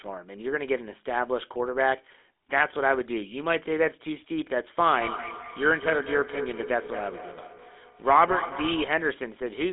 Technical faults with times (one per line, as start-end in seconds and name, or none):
0.00-9.73 GSM full-rate codec